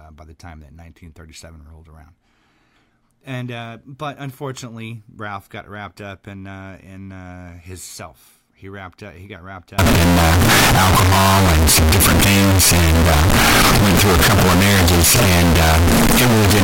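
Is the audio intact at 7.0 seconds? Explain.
Yes, the audio is intact at 7.0 seconds, with no audible fault in the speech at that moment.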